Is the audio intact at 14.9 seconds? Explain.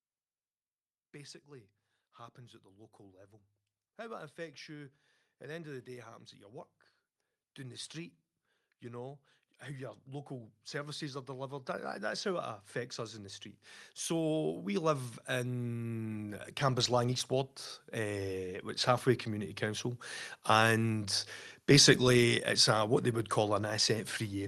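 No. At 14.9 seconds the automatic gain control is partway through a rise that runs from 14.08 to 19.58 s: having judged the input too quiet, it steadily raises its gain by about 11 dB, so the speech and the background noise swell together.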